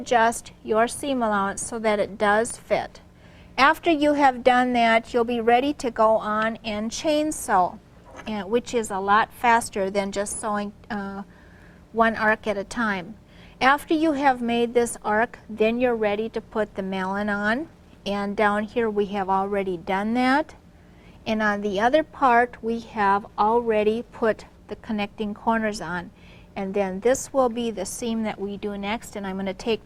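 Nothing here stands out as a technical fault; the audio runs along without any glitch, dropout or distortion worth pointing to.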